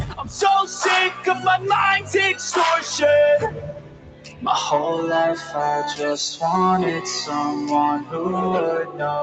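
A noise suppressor built for speech stayed active on this sound, treating its steady, sustained parts as background noise and pulling them down with a swing of around 10 dB. Onsets slip through before the suppressor reacts, but anything held or decaying is squeezed, so the level pumps and the sound thins out, while the band stops near 8 kHz as the call path normally allows.

The sound was cut by the noise suppressor in five places: 1.10 to 1.46 s, down by about 9 dB; 3.46 to 4.46 s, the longest and deepest at about 14 dB; 5.39 to 5.55 s, about 6 dB; 8.00 to 8.15 s, about 11 dB; and 8.84 to 9.01 s, about 10 dB. In each, a sustained or fading stretch sinks in level or has its decay cut short.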